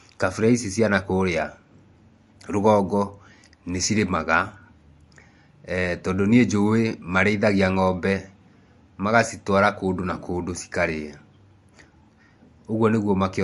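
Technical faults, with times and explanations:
Throughout, MP3 compression: the speech has likely passed through an MP3 encoder starved of bits, and the damage is plainly audible. With too little data to go round, the encoder has discarded everything above 11.3 kHz and dropped weak frequency lines that then flicker in and out between frames. That leaves a dull top end and a watery, swirling texture, with chirpy, metallic s sounds and softened attacks. The degree of damage fits a bitrate of about 50 kbps.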